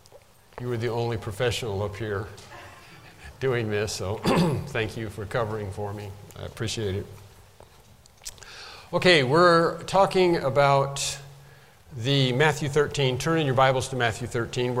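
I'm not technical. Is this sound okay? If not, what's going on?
Yes, the recording has no technical problems that a listener would notice.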